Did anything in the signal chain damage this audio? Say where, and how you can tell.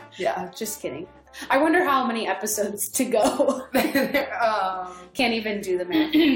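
Yes, at the streaming or playback stage. At about 3.23 s there is a tiny skip where the waveform jumps instead of continuing smoothly. This is an overlap between stream segments. Two adjacent segments, about 1 s long, carried timestamps that overlapped, so the player trimmed the overlap. The trimmed audio was not actually duplicated, so roughly 6 ms of real sound was lost and the splice left a discontinuity.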